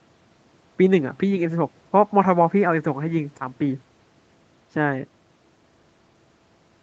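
No technical faults are audible.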